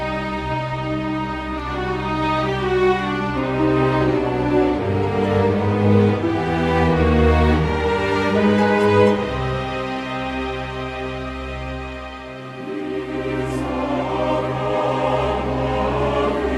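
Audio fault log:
No faults detected; nothing to log.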